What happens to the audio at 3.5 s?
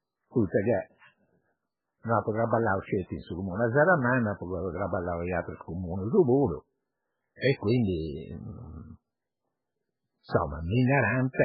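MP3 compression damage is present at 3.5 s, as it is through the whole clip. The speech has nothing above 5.2 kHz, and the sound that remains is watery and swirling, with s sounds turning metallic and chirpy and consonant attacks smeared. The likely cause is an MP3 encode at a very low bitrate, one that fits roughly 8 kbps. Short of bits, the encoder cut the treble at a fixed point and zeroed weak frequency lines, which flicker on and off from frame to frame.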